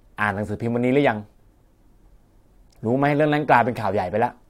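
No technical faults can be heard anywhere in the speech.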